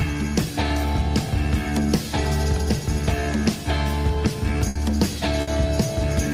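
At 4.69 to 4.78 s and again at 5.41 to 5.50 s, the sound freezes into a brief held buzz or fading hiss, then jumps ahead. Each is a burst of packet loss: about 60 ms went missing and was filled by stretching and fading the last sound.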